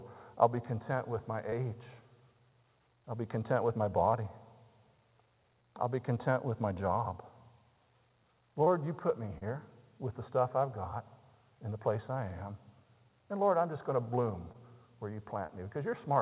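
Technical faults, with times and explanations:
1.50–1.54, 8.64–8.68, 9.38–9.44, 14.52–14.56 and 15.46–15.59 s: short concealed packet loss. Each time about 20 ms of the call arrived too late to decode. The receiver covered the gap by extending the sound just before it, repeating its pitch pattern or shaped noise, then crossfading back into real audio. Each event is heard as a brief smear or wobble. At 9.38 and 15.46 s roughly 10 ms was also trimmed away, pulling the speech slightly together. The 4 kHz band limit of the call path is heard throughout.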